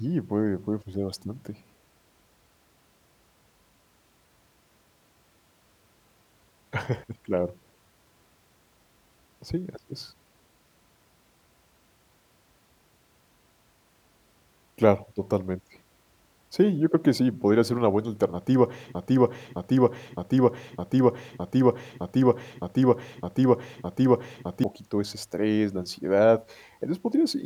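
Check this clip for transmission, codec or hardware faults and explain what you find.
There is one fault, a broken-record loop, from 18.95 to 24.64 s, just after "ser una buena alternativa" and before "ese estrés la ansiedad". A 0.61 s fragment of speech repeats identically nine times back to back, likely from a stalled player or stream resending its last buffer, so the speech meant for those seconds is lost. Unlike stutter or echo, the repeats are exact and seamless.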